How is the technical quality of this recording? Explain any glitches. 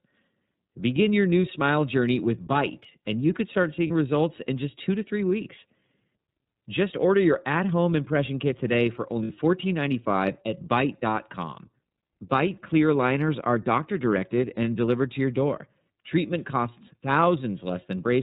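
The technical quality is limited: the speech is band-limited and plainly coded, with two short dropouts that are patched over.

The iLBC codec is audible throughout. Nothing above 4 kHz comes through, so the speech sounds narrow and telephone-like, with a rough, somewhat synthetic texture. This narrowband VoIP codec rebuilds the excitation of each frame independently rather than predicting it from the previous one. At this coding rate that independence and the missing high band are plainly audible. The sound fits 30 ms frames in the 13.33 kbps mode.

Lost iLBC frames occur at 3.87 s, lasting 30 ms, and at 9.24 s, lasting 60 ms. Each gap is filled by a brief held, vowel-like tone with a buzzy or breathy quality. This happens because packets went missing and the decoder concealed them by repeating the last pitch cycle mixed with noise. The first gap points to one lost frame and the second to two. 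Since iLBC frames stand alone, the speech recovers almost immediately after each gap.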